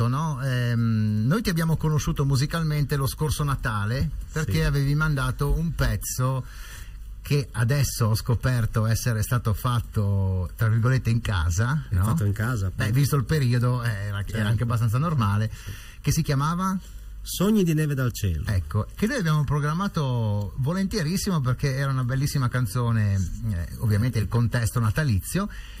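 Throughout the clip, a channel delay causes comb filtering: one side arrives under a millisecond late, and the mono sum cancels at evenly spaced frequencies from around 700 Hz upward. The hollow, phasey tone stays fixed, unlike a sweeping flanger or a simple treble loss.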